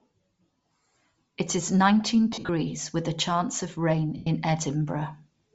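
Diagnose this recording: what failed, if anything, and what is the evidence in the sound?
The speech carries a breathy, grainy edge across the whole 5.5 seconds, with the upper band thinned and filled in by hiss-like texture rather than cleanly cut off. That is a codec-stage fault, likely Bluetooth LC3 compression at a low rate, around 32 kbps with 7.5 ms frames. The encoder discards much of the high spectrum and substitutes shaped noise. A plain low-pass filter would sound dull and clean instead of grainy.

Lost LE Audio frames, a network-stage fault on the Bluetooth link, appear twice. From 2.32 to 2.49 s, after "is nineteen" and before "with a chance of", the sound breaks into a noisy smear. The dropouts add up to about 128 ms scattered over 165 ms, which fits roughly 17 lost frames, with the longest gap around 50 ms. From 4.17 to 4.27 s, after "a chance of rain", about 98 ms is lost. 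The decoder repeats the last spectrum with scrambled phase and fades it, so the sound smears and decays instead of clicking or going abruptly silent as a plain dropout would.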